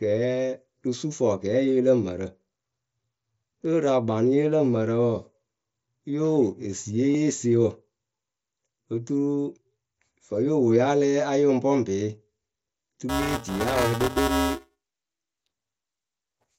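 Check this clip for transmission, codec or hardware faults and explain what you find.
Two faults are audible in this speech clip, which passes through a Bluetooth mSBC headset codec link with its usual light grain and 8 kHz top end.

From 7.13 to 7.15 s, just after "wo esiiye", there is concealed Bluetooth headset packet loss. About 22.5 ms of audio failed to arrive, which fits roughly three lost frames. The receiver filled the gap by repeating the best-matching recent stretch of waveform at full level. The result is a brief buzzy hold followed by a slight warble as the real signal resumes.

From 13.09 s to the end, buffer tearing produces a continuous robotic buzz at 345 Hz whenever speech is present. That rate fits a 128-sample buffer. The application's writes and the hardware's reads have drifted out of step and now cross inside every period. A small part of each buffer therefore plays audio from one lap earlier, a few milliseconds old, with hard splices at both edges that repeat at the buffer rate.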